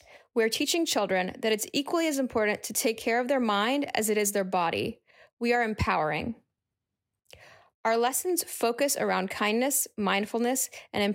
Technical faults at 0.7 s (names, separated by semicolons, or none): imaging from linear upsampling